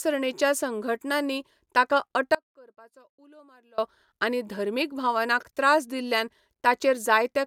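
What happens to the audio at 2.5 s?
The feed to the path was likely lost from 2.35 to 3.78 s while the chain after the break stayed live, an audio dropout to a faint residue. After "संघटनांनी ताका" the speech cuts abruptly to a faint sound about 30 dB below the signal, returning at "आनी धर्मीक भावनांक त्रास".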